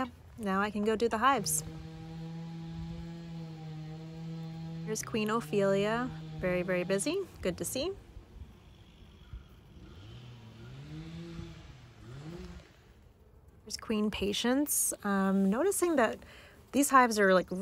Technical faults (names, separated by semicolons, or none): none